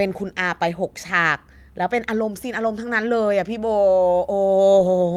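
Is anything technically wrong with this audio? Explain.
No, nothing technically wrong can be heard anywhere in this speech recording.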